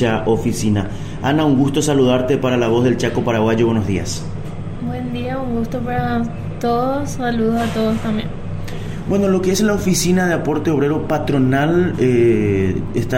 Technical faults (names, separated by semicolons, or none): none